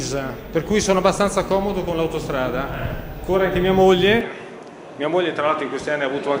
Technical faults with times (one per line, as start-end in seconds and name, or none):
4.21-6.40 input switched to a poorer device